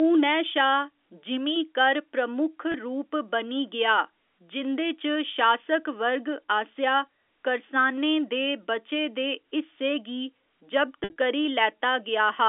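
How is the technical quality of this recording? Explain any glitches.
Two brief dropouts mar the recording, both from packet loss with pitch repetition on a line carrying G.711 telephone coding. At 2.72 s, between "जिमीं कर प्रमुख" and "रूप बनी गेआ जिं'दे", about 20 ms went missing, which fits a single lost packet. The receiver looped the last pitch period across the hole, giving a faintly held, buzzy instant. From 11.01 to 11.16 s, 120 ms were lost in scattered bursts, the longest 60 ms, so the repeats fade toward silence before the speech cross-fades back in.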